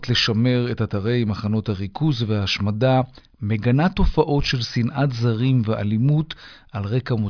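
No dropouts, glitches or other technical faults can be heard anywhere in the recording.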